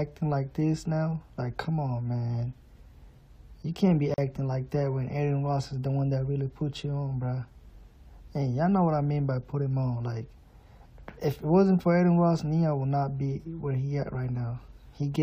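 At 4.14 s a gap at a join of encoded pieces cuts into the continuous sound. The gap lasts about 41 ms, until 4.18 s. Two separately encoded pieces were joined untrimmed, keeping encoder delay and end padding. The edges are smeared, and the sound resumes where it stopped.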